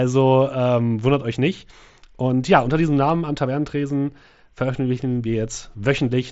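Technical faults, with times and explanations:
Nothing stood out on listening to this speech recording.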